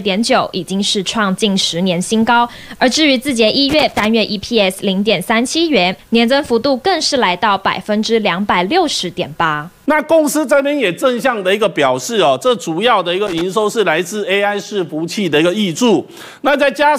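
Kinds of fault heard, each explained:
Loose connector crackle: a worn or grubby contact somewhere in the chain keeps making and breaking as it shifts, so the signal gets chopped on and off in quick, uneven bursts. Here you get two short scratchy patches, a longer one from about 3.69 to 4.05 s and a quicker flick from 13.27 to 13.41 s, each sounding like rough, irregular crackle sitting right on top of the audio.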